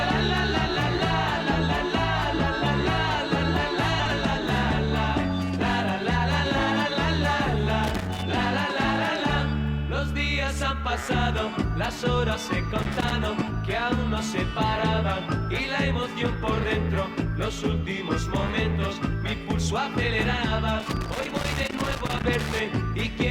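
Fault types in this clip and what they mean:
Frames out of order: Two adjacent 60 ms blocks play swapped, at 3.99 to 4.13 s and 13.35 to 13.50 s. Each gives a brief garbled flutter.
Loose connector crackle: A worn contact rapidly makes and breaks, chopping the signal. Irregular scratchy crackle bursts occur at 7.84 to 8.22 s, 12.83 to 13.12 s, and 20.80 to 22.60 s.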